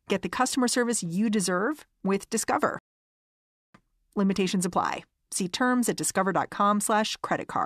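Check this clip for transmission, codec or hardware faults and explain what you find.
One fault stands out, a rebuffering stall. From 2.79 s to 3.74 s the speech drops abruptly to silence, then picks up again at exactly the point where it broke off, with nothing skipped or repeated. The player ran out of downloaded audio and had to wait for more data before continuing, so playback simply paused. No sound is lost, but the gap adds about 0.96 s to the running time.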